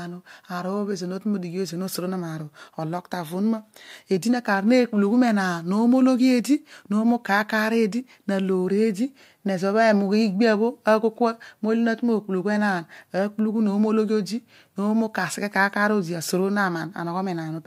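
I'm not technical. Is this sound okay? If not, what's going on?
Yes, it sounds fine.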